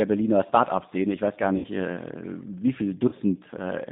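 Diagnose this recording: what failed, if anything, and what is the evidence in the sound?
At the codec stage, the speech runs through the G.729 codec, which fits an 8 kbit/s link. The band ends near 3.7 kHz, and the synthesised speech sounds plainly rough and synthetic throughout.

At the network stage, VoIP packet loss concealed by the speech codec appears after "ich weiß gar" (1.58–1.67 s, about 60 ms lost) and after "wie viele" (3.09–3.15 s, 30 ms). The decoder stretches the last sound into a fading buzzy tone or coloured noise.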